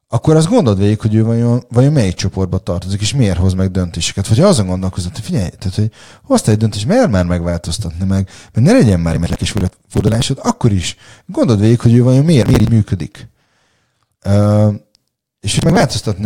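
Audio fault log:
9.11–10.23 s, 12.43–12.69 s, 15.59–15.83 s: processor overload crackle. The processor repeatedly failed to finish its short audio buffers, around 10 ms each, in time, and dozens of them were skipped instead of played. Each skip is a tiny hard-edged gap, so the speech tears into gritty crackle. It is longest after "meg mert ne legyen", clearing by "akkor is gondold végig", then returns briefly after "végig hogy ő vajon" and again near the end.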